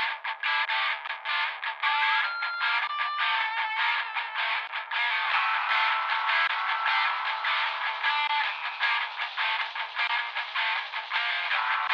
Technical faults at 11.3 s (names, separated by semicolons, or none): none